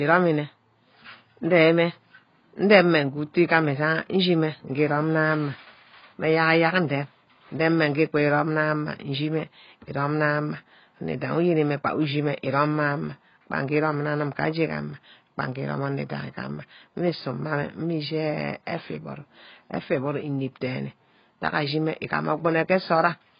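From start to finish the speech sounds dull and smeared, with nothing above 5.1 kHz and a warbling, fizzy texture on sibilants and held sounds. This is likely AAC compression at heavy damage, consistent with a very low bitrate around 16 kbps, where the encoder drops the top band and starves the rest. On a spectrogram the energy stops at a flat ceiling near 5.1 kHz, with blotchy texture below it.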